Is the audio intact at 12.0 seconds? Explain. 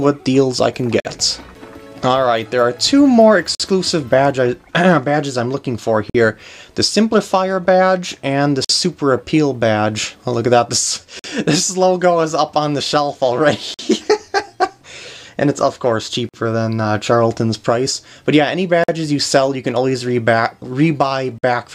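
Yes, the audio at 12.0 seconds is intact, with no dropout, click, distortion or other fault audible at that point.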